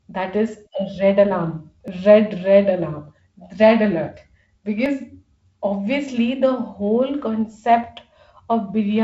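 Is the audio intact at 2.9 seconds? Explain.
Yes, at 2.9 seconds the audio is intact, with no fault at that moment.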